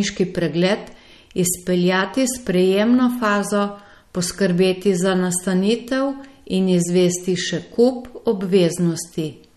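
MP3 compression runs throughout this speech recording: nothing sounds above 13.2 kHz and the damage is plainly audible, likely from a low-bitrate encoder zeroing weak spectral lines.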